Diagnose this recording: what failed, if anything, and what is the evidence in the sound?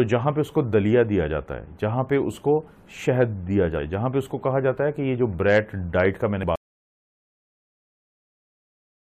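Codec stage: compressed frames skipped at 6.42 s. About two 23.2 ms frames, roughly 50 ms, are lost, and the audio jumps ahead by that amount.

Audio dropout to silence: from 6.56 s to the end, the sound cuts to silence with no room tone, likely from a lost input or link while recording continued.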